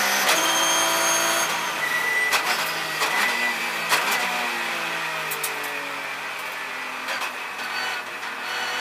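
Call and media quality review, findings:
No faults found on review of the audio. Nothing audible calls for follow-up.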